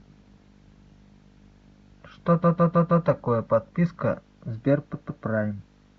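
At 2.42 s the speech stutters. A 157 ms block plays four extra times, until 3.05 s. At 4.93 s a block of the same length plays twice more, until 5.24 s. These are repeated frames, with compressed data sent again.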